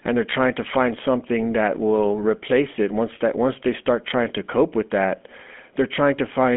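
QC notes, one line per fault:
Throughout, GSM full-rate codec: the speech has passed through the original GSM coder, and its character fits the 13 kbps full-rate scheme. The codec models the vocal tract and rebuilds the excitation from a sparse train of regularly spaced pulses rather than the real waveform. That leaves a plainly audible buzzy, gravelly roughness on the voice. The sound is confined to a telephone band of 200 Hz to 3.4 kHz, with nothing above 3.6 kHz, so sibilants sound dull and blunted.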